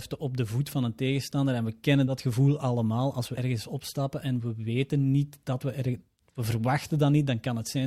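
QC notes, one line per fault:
2.07–2.12 s and 3.37–3.40 s, compressed frames skipped: whole 20 ms frames never reach the output, about two and then about three, so the speech jumps ahead by around 40 ms and 70 ms.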